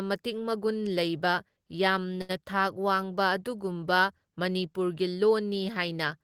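At 2.21 s a sound is held unnaturally long, about 76 ms, with a faint buzz or dip: a short stall from a late packet, stretched by the receiver until the speech resumed.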